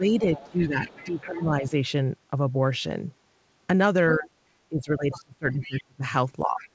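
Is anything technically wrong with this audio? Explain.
Yes. The speech repeatedly ducks and breaks up in stretches, and a second, fainter voice bleeds through at several points. The audio also carries no content above 8 kHz, which fits a G.722 call path at 64 kbps.

Speech suppressed in double talk appears from 0.0 to 1.83 s, 4.16 to 4.29 s, 4.69 to 6.04 s and 6.42 to 6.65 s. The voice dips by about 15 dB, and by about 30 dB in the 4.69 s stretch, sounding choppy and hollowed. The likely cause is an echo canceller that cannot separate the near talker from loudspeaker echo and attenuates both.

The other side's voice leaks through from 0.36 to 1.22 s, 5.12 to 5.21 s, 5.52 to 5.83 s and 6.6 to 6.69 s. It comes as faint scraps roughly 20 to 25 dB under the main speech. The likely cause is far-end audio from the loudspeaker that the echo canceller left partly in the microphone signal.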